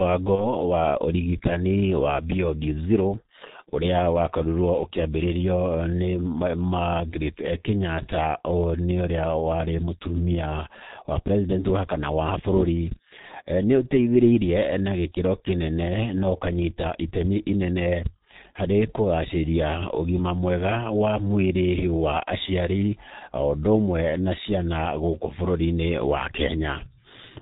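The whole speech clip carries the sound of the G.723.1 codec, heavily degraded: nothing above 4 kHz, hoarse and muffled timbre, smeared consonants. The low-rate 30 ms frame coding and slow model updates fit the 6.3 kbit/s mode.

From 0.35 to 0.53 s, VoIP packet loss concealed by the speech codec stretches the audio into a buzzy tone or coloured noise that fades. The decoder extrapolated its last pitch and filter across what fits a single lost 30 ms frame, and the sound stays weak until "wa ũrigitani wa".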